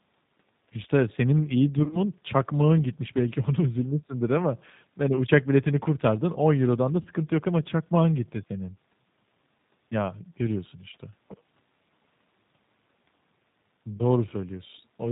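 From the start, the speech has a slightly rough, synthetic edge and no high end, which fits the G.729 codec, here the G.729A variant at 8 kbit/s. It rebuilds each 10 ms frame from a vocal tract filter, a pitch predictor and a few pulses, and discards everything above 4 kHz. That leaves the voice intelligible but dull, with plainly audible coding damage.

From 1.84 to 2.00 s the voice turns into a stretched, fading sound that sags and thins. This is VoIP packet loss concealed by the speech codec. About 60 ms of audio went missing, scattered across 80 ms with the longest gap near 30 ms, and the decoder kept repeating its last pitch and filter at falling gain. Shorter versions follow at 5.16 s, a brief 10 ms smear, and at 7.02 s, a 30 ms stretch. Each leaves the voice weak for a moment afterwards.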